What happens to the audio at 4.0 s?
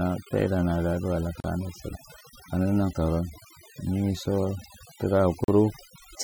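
At 4.0 s the speech is affected by overdone noise removal, which runs through the whole clip rather than starting there. A noise reducer was pushed too hard. It cuts individual frequency bands deep whenever they sit close to its noise estimate. Quieter parts of the voice get cut along with the noise. The background drops and breaks up into small twinkling specks.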